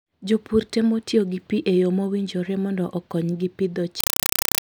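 Speech runs normally until just after "yo mowinjore mondo okonygi", when at 4.00 s it gives way to a compressed stream played as audio until the end at 4.63 s. Encoded Dolby Digital data is being treated as ordinary samples, which fits an AC-3 stream at around 192 kbps. Each frame arrives as a 4.0 ms burst of noise followed by zero padding, repeating 31.25 times a second, so it sounds like loud chattering static. A waveform shows dense noise blocks separated by flat silence, and a spectrogram shows evenly spaced broadband vertical stripes.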